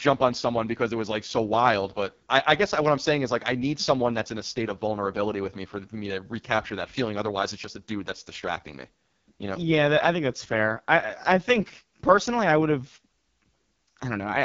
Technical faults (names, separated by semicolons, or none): AMR wideband (HD Voice) codec